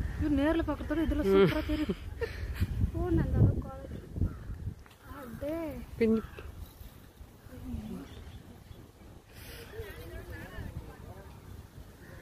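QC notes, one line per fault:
No faults to log for this clip.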